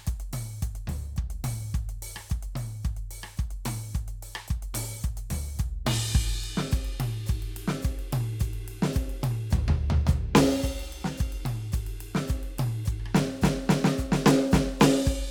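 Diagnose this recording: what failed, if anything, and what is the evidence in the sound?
Nothing in this music recording points to a failure at any stage of the chain. There is no audible event to tie to a time or a mechanism, so there is nothing to diagnose.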